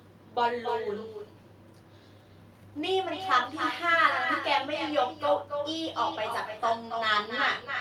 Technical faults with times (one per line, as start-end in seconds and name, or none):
0.00-7.80 echo with no canceller